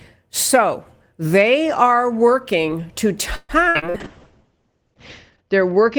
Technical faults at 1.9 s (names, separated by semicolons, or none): none